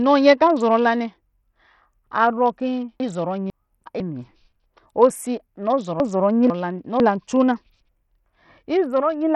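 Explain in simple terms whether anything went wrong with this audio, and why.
Throughout the speech, the treble is thin and unsteady, with nothing above about 16.8 kHz and a gritty, grainy edge on the sound. That points to heavy Bluetooth SBC compression, likely from a low-quality wireless link squeezing the top frequencies too hard.

Between 3.0 and 4.0 s, and again between 6.0 and 7.0 s, there are chunks out of order. A half-second piece of audio arrives late and plays after the half-second meant to follow it, so those moments sound jumbled.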